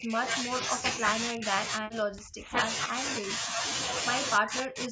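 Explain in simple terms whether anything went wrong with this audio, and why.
The speech repeatedly dips or drops out: 0 to 0.21 s, 0.43 to 0.55 s, 0.78 to 2.56 s (longest), 2.87 to 3.0 s, 3.19 to 3.63 s, and 4.38 s to the end, where it nearly vanishes. This is likely speech suppressed in double talk: the call's echo canceller mistook the talker for echo from the other side and turned them down.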